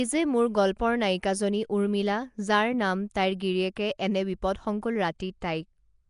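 From start to finish the speech carries a rough, hissy halo and a smeared, underwater quality, with plainly audible damage and nothing above 10.6 kHz. This is likely Nellymoser compression: the codec spends a fixed two bits per sample on short blocks, so weak bands are left empty and filled with noise. That noise fill, rather than the swirling, metallic warble of a low-rate MP3, is the giveaway, and the damage is consistent with a rate near 44 kbps.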